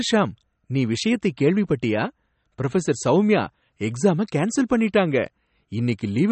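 From start to finish the speech sounds watery and swirly, with the top end gone above about 8.4 kHz. That points to likely MP3 compression at a low bitrate, around 32 kbps, where the encoder drops the treble and lets weak frequency lines flicker between frames.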